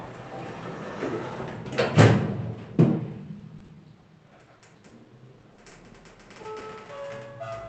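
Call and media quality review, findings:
Repeated packet loss (robotic sound), 3.39–4.93 s: eight concealment gaps, longest 40 ms, about 9% of the span patched. Jitter buffer/decoder keeps extending the last sound, so the audio turns choppy. This differs from isolated loss because the gaps cluster densely enough to sound robotic.

Short concealed packet loss, six isolated events at 5.41–5.45, 5.55–5.59, 5.69–5.73, 6.43–6.47, 6.59–6.63 and 6.85–6.89 s: each a brief smear or wobble where roughly 20 ms was synthesized from the preceding audio, then crossfaded back. Spaced apart, so no sustained robotic texture. The Opus call path cuts the top end near 8 kHz.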